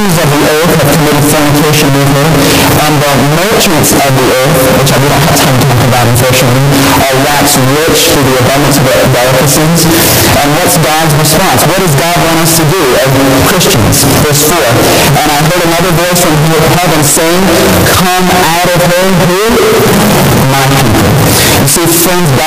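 The 16-bit samples have likely had signed and unsigned mixed up, so the top bit of every sample is flipped and each point where the waveform should pass quietly through zero instead leaps from one extreme of the range to the other. Across the whole clip this comes out as very loud, harsh distortion, with the quiet passages blasting just as hard as everything else, so the audio has no dynamic range left.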